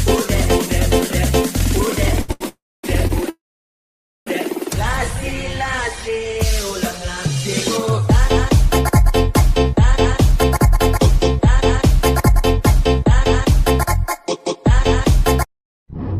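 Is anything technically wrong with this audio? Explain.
Yes. Short stalls from a late packet hold the sound too long with a faint buzz or dip at 2.21–2.30, 2.32–2.42 and 3.07–3.12 s. A late packet left the jitter buffer empty, so the last sound was stretched until it arrived.

Two call audio freezes, at 2.48–2.85 s and 3.30–4.28 s, trail into silence for about 0.25 s and 0.88 s, then resume where they stopped. The likely cause is delayed packets draining the jitter buffer.

A jitter buffer speed-up makes the sound run faster at unchanged pitch: 3% faster over 10.36–13.63 s and 7% faster over 14.06–16.16 s. Tiny pitch-period pieces were cut, roughly a tenth of a second and a bit more, to shrink excess buffered delay.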